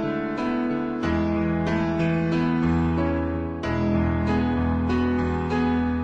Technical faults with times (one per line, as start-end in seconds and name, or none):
none